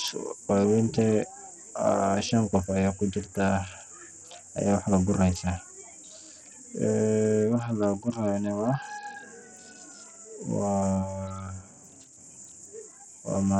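Speech clip, likely passed through Bluetooth SBC compression at a starved bit pool, fitting roughly 64 kbps: nothing survives above 15.5 kHz, treble flickers, and gritty quantisation noise coats the speech throughout.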